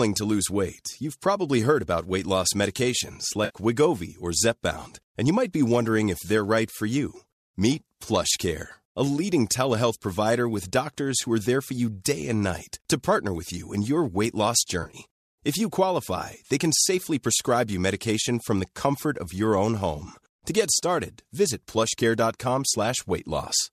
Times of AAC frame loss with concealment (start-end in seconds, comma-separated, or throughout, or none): 3.44-3.56, 14.82-14.97